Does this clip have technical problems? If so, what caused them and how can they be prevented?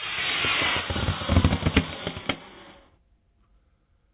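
No, the signal holds steady throughout this recording of sounds, with no technical faults to trace or prevent.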